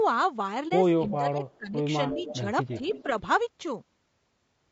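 Throughout, the speech was likely carried by low-delay AAC compression such as AAC-ELD at a low bitrate, around 32 kbps. Its short frames resolve pitch harmonics poorly, so the voice sounds plainly rough and grainy, with noise between harmonics and a dulled or synthetic-sounding top band.

At 0.68 to 0.72 s, one AAC frame was lost and the decoder muted it. About 30 ms of sound fades out and back in across the overlapping windows, leaving a brief dip.

From 1.07 to 1.8 s, speech is suppressed in double talk. The echo canceller was likely unable to tell this talker from loudspeaker echo while both spoke, so it pulled the level down. Over around half a second the voice dips in pieces, by roughly 20 dB at its deepest.

Echo leak follows. A loudspeaker's echo was likely not fully cancelled and was sent back as a delayed copy. At 1.49 to 1.57 s it arrives 309 ms late and is very faint. At 2.13 to 2.37 s it arrives 330 ms late and is far stronger, about 15 dB below the speech. 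At 2.7 to 3.03 s it arrives 330 ms late again, about 20 dB down.

At 2.13 to 2.45 s, speech is suppressed in double talk again alongside that echo, a shallower dip of a few decibels lasting about a third of a second.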